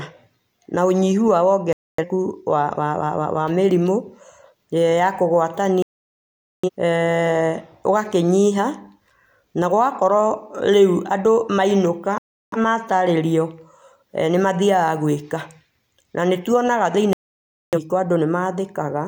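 Digital broadcast dropouts mute the speech at 1.73–2.04, 5.82–6.70, 12.18–12.57 and 17.13–17.78 s, as the receiver lost frames and cut out until clean ones returned.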